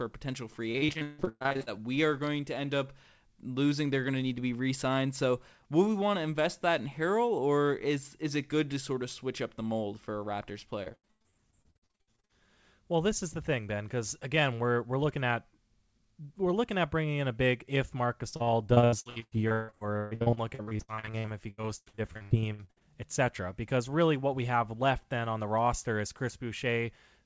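Speech carried over a call link, with the band ending at 8 kHz as a wideband call codec would, shows repeated packet loss (robotic sound) in three stretches: 0.72–1.79 s, 10.83–12.48 s and 18.29–22.82 s. Audio keeps dropping out, and each hole, up to about 160 ms, is patched by stretching the previous sound, so roughly half of each stretch is synthetic. Unlike a single dropout, the holes arrive in rapid chains, giving sustained choppiness.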